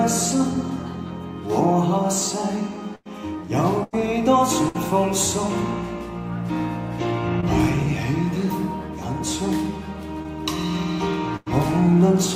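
Three bursts of packet loss come early, at 2.95–3.07, 3.83–3.95 and 4.69–4.76 s. Each time, the receiver stretches the last bit of sound into a fading buzz or hiss for roughly 60 to 100 ms, then jumps ahead, with a similar stretch of audio simply gone.

At 7.40–7.44 s there's a short concealed packet loss. Only about 20 ms went missing, and the decoder papered over it by extending the preceding sound and blending back in, so you get a quick smear or wobble.

Then at 11.36–11.48 s there's one more burst of packet loss, like the first: about 100 ms of held, decaying sound, then a restart with about 100 ms skipped.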